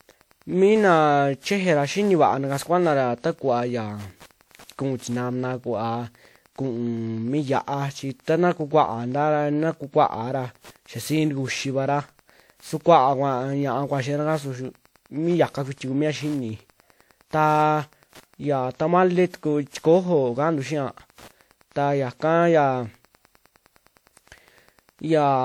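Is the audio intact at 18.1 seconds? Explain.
No. At 18.1 seconds, as everywhere in the clip, Wi-Fi interference is present: a nearby radio's beacon, rectified by the audio circuit, ticks steadily every 102.4 ms, about ten times a second, sitting about 35 dB below the speech. That strict regular rate marks it as Wi-Fi rather than random crackle or mains hum.

The speech there also sounds swirly, smeared and hollow, with blurred attacks, though content still reaches 20.1 kHz. That full bandwidth with smearing points away from a single low-bitrate encode, to generation loss, likely from WMA at around 96 kbit/s repeated about seven times, each pass requantising on a shifted frame grid.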